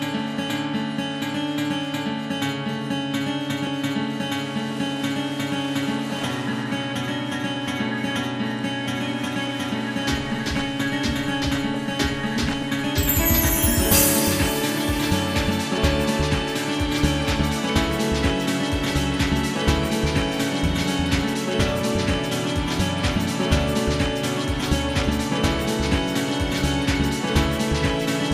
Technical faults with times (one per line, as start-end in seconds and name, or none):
0.00-28.33 MP2 compression